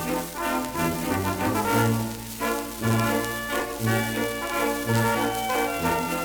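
At about 1.65 s there's a sudden skip where roughly a twentieth of a second of audio vanishes and the two sides butt straight together with no gap. That's likely audio missing between chunks, with a chunk boundary every 2 s dropping a slice during the handover.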